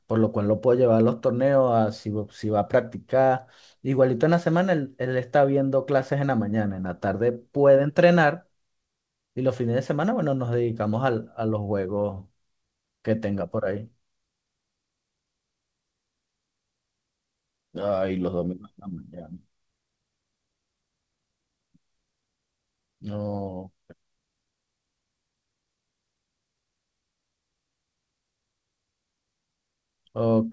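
No faults found in the speech: the band stops at 8 kHz, which fits a wideband call codec such as G.722, and the call path carrying it is working normally.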